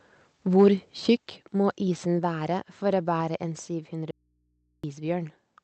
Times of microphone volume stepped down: 1.17, 2.19

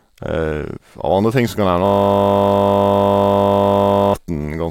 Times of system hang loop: 1.86-4.14

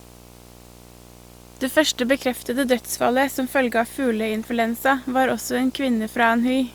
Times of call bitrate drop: none

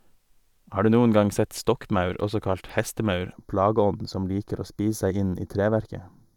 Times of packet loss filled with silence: none

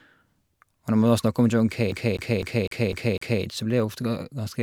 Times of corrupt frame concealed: none

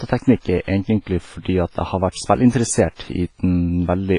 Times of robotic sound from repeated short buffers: none

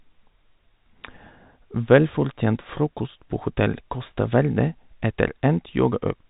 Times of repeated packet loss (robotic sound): none

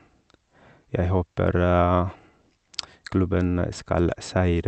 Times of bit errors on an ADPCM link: none

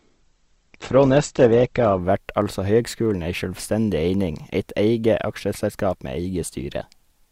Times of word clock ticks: none

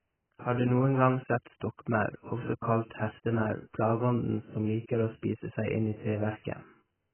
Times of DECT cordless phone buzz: none

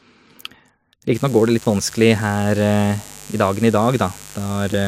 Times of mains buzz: 1.14-4.87

